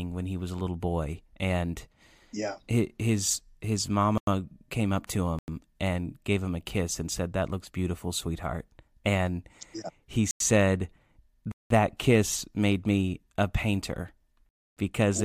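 Five blocks of digital silence cut through the speech. The first, after "and yeah his his" at 4.18 s and ending just before "came up to", lasts about 93 ms, as do those at 5.39 s and at 10.31 s after "yeah he". At 11.52 s the gap is about 186 ms, and after "made me a painter" at 14.49 s it is about 279 ms. The lengths are whole multiples of 93 ms, which fits an output buffer of 4096 samples that was not filled in time, once per missed buffer. Each gap is heard as an abrupt hole. On a waveform it appears as a near-flat line with a hard step at each end. On a spectrogram it is a blank vertical band.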